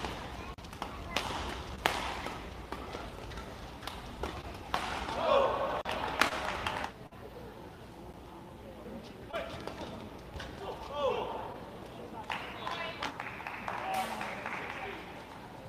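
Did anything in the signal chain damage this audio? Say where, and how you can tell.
Yes. The block of digital silence points to the driver or buffer stage. At 0.54 to 0.58 s and again at 5.81 to 5.85 s the signal drops to silence for 40 ms and returns with no fade. Identical hard-edged dropouts of equal length suggest the output buffer was not filled in time, which fits a missed buffer period rather than a network problem.

Short concealed packet loss comes from the network side of a call path, handled in the decoder. Brief smeared or wobbly moments occur at 1.75 to 1.79 s, 4.41 to 4.45 s, 6.29 to 6.33 s, 9.31 to 9.35 s and 11.53 to 11.56 s. Each marks about 20 ms of missing audio that the receiver patched by extending the preceding sound for 10 to 19 ms before blending back into real signal. The result is a soft smear, not a clean click.

A burst of packet loss, also from the network, occurs at 7.07 to 7.13 s. 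About 40 ms of audio never arrived in time, and the concealment stretched the previous sound for roughly 45 ms while turning it down. It is heard as a short held, fading continuation, after which the audio resumes further along with the intervening material gone. It is longer than the short concealed patches.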